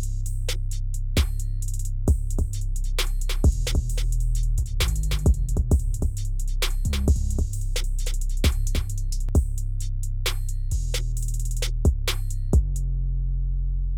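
A doubled audio track runs from 2.33 s to 9.29 s: a second, full-band copy of the sound trails the original by roughly 300 ms, about 5 dB quieter. It carries no reverberant tail or room colouring, so it reads as a distinct slapback repeat rather than an echo, and it cuts in and out abruptly at both ends. The likely cause is the same signal being captured again through a slower path and mixed back in.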